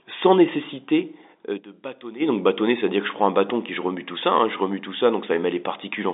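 A piercing 5 kHz whistle rises out of the speech at 1.15 s, swelling over about half a second to sit well above the voice, and cuts off at 2.46 s. This is loudspeaker feedback squeal: the microphone re-amplified its own loudspeaker until that one frequency ran away.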